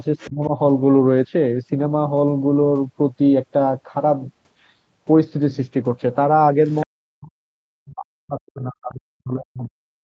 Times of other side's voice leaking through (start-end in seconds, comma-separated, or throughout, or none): 0.18-0.47, 6.66-6.86